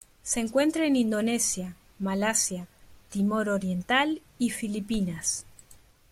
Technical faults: CD scratch ticks

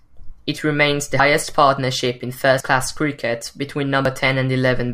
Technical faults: dropped buffer (overrun)

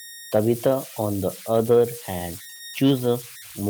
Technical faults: converter idle tones; short concealed packet loss

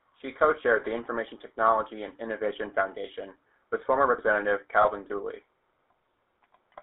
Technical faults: GSM full-rate codec; lost GSM frames

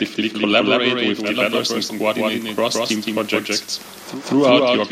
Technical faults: doubled audio track; digital radio blending to analogue

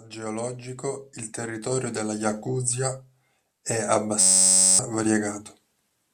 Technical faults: system hang loop

